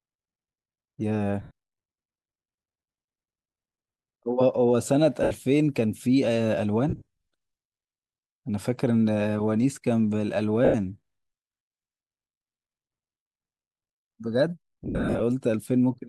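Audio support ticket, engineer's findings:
Speech breaks up into a short noisy, hissy smear instead of a clean gap. This happens at 1.42–1.51 s, 5.23–5.31 s, 6.89–7.02 s, 10.65–10.75 s, 13.18–13.26 s and 14.84–15.20 s. The third and last are choppier, with about 260 ms lost in bursts spread over 380 ms and 360 ms, and no single run much past 0.05–0.07 s. The probable component is the Bluetooth LE link, with lost LE Audio frames. The LC3 decoder conceals each loss by replaying the last spectrum with randomised signs, and the loss lengths fit 10 ms frames. The light lossy compression shows at most as a faint watery texture on noise and attacks.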